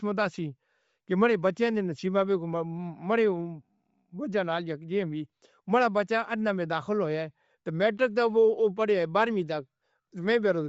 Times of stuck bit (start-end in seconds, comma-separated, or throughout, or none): none